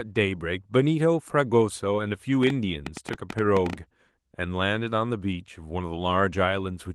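From 2.43 to 3.74 s, a train of clicks ticks over the speech, about 9.2 per second at an uneven pace, roughly fifteen in all, peaking around 10 dB above the speech. The likely cause is interference or a faulty connection injecting repeated pulses.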